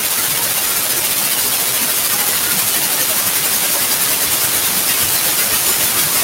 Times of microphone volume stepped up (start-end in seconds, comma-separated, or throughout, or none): none